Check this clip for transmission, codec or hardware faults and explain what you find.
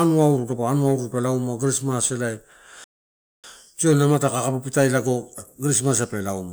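A playback stall from 2.84 to 3.44 s cuts the speech off mid-flow for about 0.6 s of dead silence before it picks up again. The likely cause is the player running out of buffered data, or its output thread being blocked, until it recovered.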